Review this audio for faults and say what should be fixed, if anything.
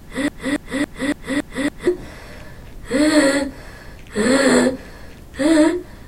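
A broken-record loop is already under way at 0 s and runs until 1.87 s. A 0.28 s fragment repeats six times, replacing the original sound. This is likely a stalled player or stream resending its last buffer. Keep playback buffers filled and detect stalls before repeating stale data.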